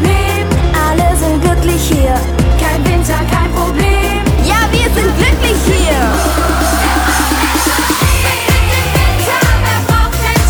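At 7.74 s a short, ragged burst of crackle and scratching breaks into the sound, lasting about a tenth of a second until 7.84 s. This is loose connector crackle: a worn or dirty contact somewhere in the signal path briefly lost and regained its grip as it shifted, chopping the signal on and off many times in quick succession. The uneven, gritty texture comes from those rapid interruptions.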